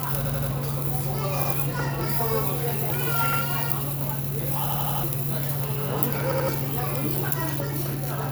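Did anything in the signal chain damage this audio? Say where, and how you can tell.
Yes. Repeated buffer faults at the driver or buffer stage occur at 0.26–0.51, 1.45–1.54, 3.33–3.41, 4.69–5.04 and 6.32–6.49 s. Each is a stutter: an 85 ms piece replays with hard joins, consistent with a 4096-sample buffer replayed when fresh audio arrived late.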